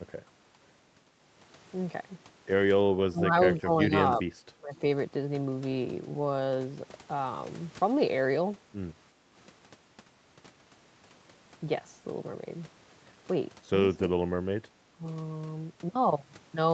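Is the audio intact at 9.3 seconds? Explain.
No. From 9.23 to 9.27 s, the echo canceller ducked the microphone during loudspeaker playback, so the background, gated by the echo canceller, briefly dips about 5 dB.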